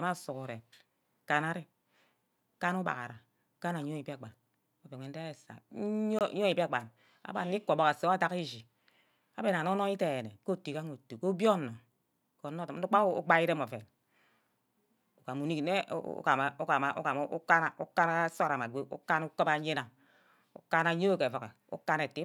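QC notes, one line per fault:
6.19 to 6.21 s, block of digital silence: the speech drops to silence for 21 ms, which fits a 1024-sample buffer not filled in time. The cut out and back is hard, unlike a faded dropout, which dips smoothly without snapping.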